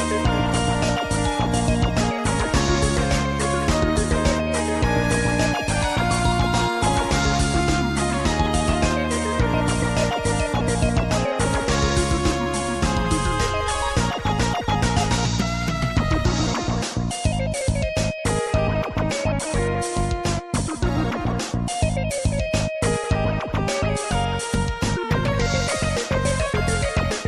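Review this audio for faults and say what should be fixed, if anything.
No technical faults can be heard anywhere in this clip. Nothing needs to be fixed.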